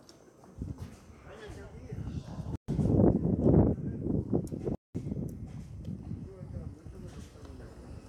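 Bluetooth stalls at 2.56 s and 4.75 s cut this sound recording to silence for 127 ms and then 198 ms before it resumes, most likely because interference delayed wireless packets, emptying the headphones' buffer until retransmitted audio arrived.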